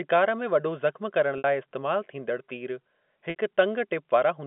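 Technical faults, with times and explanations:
1.38–1.44 s and 3.30–3.36 s, packet loss with pitch repetition: each time about 60 ms of audio goes missing, which fits three 20 ms packets, and the receiver fills the hole by repeating the last pitch period and fading it out. The result is a brief held, buzzy tone dying away rather than a clean silent gap or a click, and the sound then returns through a short cross-fade. The telephone-band G.711 coding carries it normally.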